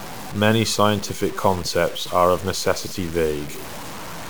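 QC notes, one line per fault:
Throughout: low bit depth without dither. The speech carries a grainy distortion that rises and falls with it, roughly 15 dB below the signal. Quiet tails sputter or drop out. The likely cause is truncation without dither to something like 6 bits.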